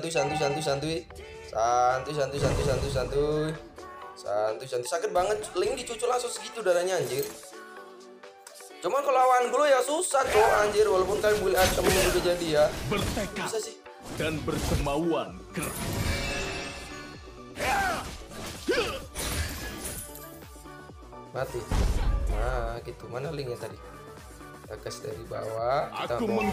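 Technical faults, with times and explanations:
No technical faults can be heard; the signal holds steady with no dropouts, distortion or level problems at any point.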